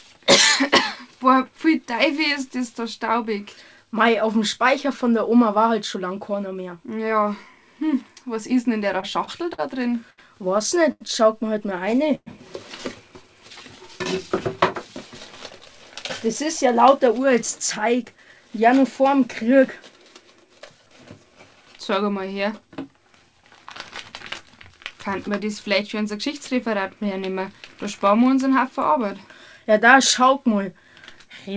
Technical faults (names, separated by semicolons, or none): repeated stalls (stutter); short stall from a late packet; call audio freeze; jitter buffer speed-up